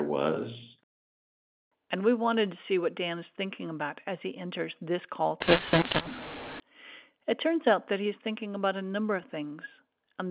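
A speech clip carried over G.711 telephone coding, audible as a band limit near 4 kHz that fits 8 kHz sampling. From 5.40 to 6.60 s the mu-law and A-law codings are mixed up: mu-law samples are decoded with the A-law table. This scrambles the level mapping, so some samples are inflated and others shrunk, giving a harsh, distorted sound, while the quietest samples are pushed well above silence and gaps fill with noise.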